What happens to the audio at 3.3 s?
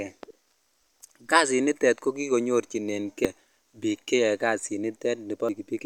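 At 3.25 s there is a very brief blip caused by damaged data in a compressed stream, just before "biik cheyoe". Corrupted bytes make the decoder misread a frame and lose sync until it finds the next valid frame header.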